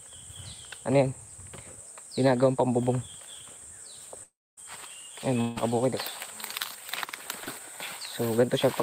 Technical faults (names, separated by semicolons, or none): long network dropout; short concealed packet loss